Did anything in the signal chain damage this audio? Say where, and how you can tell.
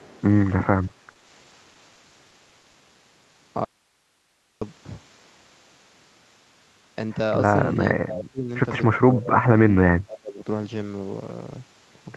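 Yes. In the first 0.22 s a faint delayed copy of the speech trails the direct sound by about 0.3 s, roughly 30 dB below it. That is an echo leak. It is likely that the far end was on a loudspeaker and its echo canceller let some of the microphone pickup through. The residue was sent back over the call, so the copy arrives one round trip late.

From 0.61 s to 2.75 s the speech turns choppy and robotic, with about a dozen short holes, none longer than 40 ms. Together they remove about 280 ms, roughly 13 percent of that stretch. This is repeated packet loss on the network. Each missing packet was patched by stretching the previous sound, and the next loss followed before the voice could recover.

At 3.65 s the speech cuts off abruptly and returns at 4.62 s. The gap of nearly a second holds only hiss about 45 dB below the signal. It is an audio dropout to a faint residue, with no fade on either side. 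The likely cause is that the signal feeding the chain was lost while the path after the break stayed live and passed on its own noise floor.

Between 7.84 and 8.50 s, 9.08 and 9.46 s, 9.67 and 9.75 s, and 9.98 and 10.44 s, the speech dips sharply. The deepest drops are about 25, 30, 10 and 25 dB. This is speech suppressed in double talk, at the call-processing stage. Both sides were likely talking at once, and the echo canceller, unable to separate the talker from the loudspeaker echo, attenuated everything.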